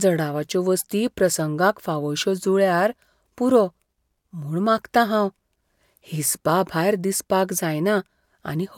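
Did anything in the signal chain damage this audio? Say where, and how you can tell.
No, nothing in the chain has damaged this speech recording. No stage, from capture through to playback, leaves any mark on it that can be heard.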